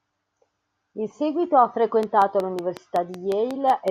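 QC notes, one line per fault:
2.03–3.89 s, train of clicks: a repeating electrical pulse, likely interference from nearby equipment or a faulty connection or power supply, breaks into the signal path at a steady 5.4 per second. Around ten near-identical clicks result, evenly spaced and peaking roughly 10 dB above the speech. They come across as a regular ticking laid over the talker that continues through the gaps, running to almost the end of the clip.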